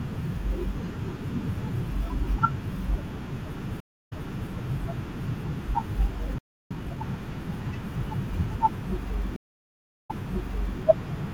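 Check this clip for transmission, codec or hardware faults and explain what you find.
Three kinds of fault appear: two stream reconnects, a playback stall, and a time-compressed catch-up straight after it.

Stream reconnect, 3.80 to 4.50 s and 9.36 to 10.80 s. The connection dropped, so playback fell silent, and a fresh decoder joined mid-stream. The first gap lasts 283 ms and the sound resumes about 0.42 s earlier, repeating material. The second lasts 703 ms and rewinds 0.73 s. On a waveform each shows a flat gap, a soft onset, then a duplicated stretch.

Playback stall, 6.38 to 6.71 s. The sound stops mid-flow for 321 ms, likely because the player ran out of buffered data. On the waveform this is a clean flat line, and on the spectrogram a blank vertical band, with the sound carrying on where it stopped.

Time-compressed catch-up, 6.71 to 7.03 s. To clear the backlog from the stall, the player cuts out small pieces and cross-fades the remainder, running at 2.0× speed without any pitch change. 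The sound is hurried. The spectrogram shows compressed syllable spacing with harmonics held at their normal height.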